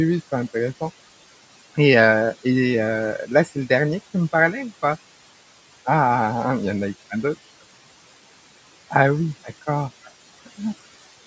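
Across the whole speech clip the background pumps with the talking: between phrases the room noise drops away, and when speech resumes the noise comes back up underneath it. These are noise suppressor artifacts. The suppressor judges, frame by frame, which frequency bands hold steady noise and lowers them, here by about 18 dB. The room noise, which sits about 19 dB below the speech, therefore swings in and out. The call microphone processing has nothing above 8 kHz.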